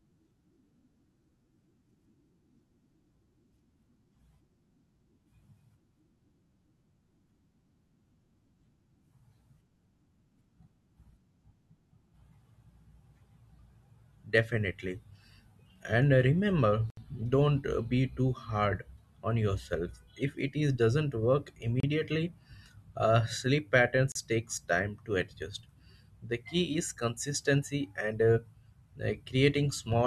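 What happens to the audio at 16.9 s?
A likely Bluetooth stall: delayed packets emptied the headphone buffer, so playback drops to silence for 71 ms, from 16.90 to 16.97 s, before the speech resumes.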